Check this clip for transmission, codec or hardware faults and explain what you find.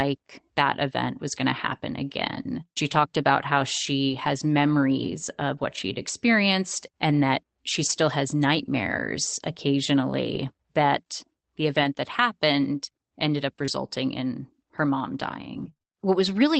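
Two kinds of transmission fault appear in the speech, both from packet loss on a call path.

Lost packets rebuilt from error correction occur at 4.09 to 4.15 s, right after "talked about how", and at 5.03 s, just before "of what she'd experienced". The first covers two packets, about 40 ms of rebuilt audio; the second is a single 20 ms packet. In each case the following packet carried a low-bitrate copy of the lost one (Opus in-band FEC), and the decoder played that copy. There is no gap, just a brief stretch that sounds rougher and noisier than the frames around it.

Scattered short gaps run from 7.89 to 15.93 s, starting after "experienced and that she". Roughly seven separate losses fall across this stretch, with about 140 ms of audio missing in total. Each hole was patched by continuing the last sound, so they come through as short ticks or smears rather than silences. The longest is around 30 ms, and concealment covers only about 2 percent of the span, so the sound between the patches stays clear.

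The audio passed through a WebRTC call path using the Opus codec. Content stops at 8 kHz, which fits wideband operation, and the coding noise is consistent with a bitrate around 24 kbps.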